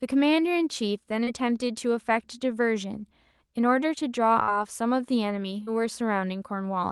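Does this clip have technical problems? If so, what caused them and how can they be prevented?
Yes. The speech carries two short concealed packet losses, at 1.23 to 1.30 s and again at 5.63 to 5.70 s. In each, about 40 ms of audio failed to reach the decoder in time, and the receiver covered roughly 34 ms of it by extending the preceding sound before crossfading back into real audio. The result is a brief smear or wobble. Prevention: give the jitter buffer enough depth and keep the network path free of queuing spikes so packets arrive before their playout deadline.

There is also a burst of packet loss at 4.43 to 4.50 s. Consecutive audio went missing, about 40 ms of content, and the receiver synthesised around 46 ms to bridge it, stretching the last sound and letting it decay. This produces a held, fading tail followed by a jump to later material, with what lay between simply absent. Prevention: enable in-band forward error correction or redundancy so a run of lost packets can be reconstructed rather than guessed.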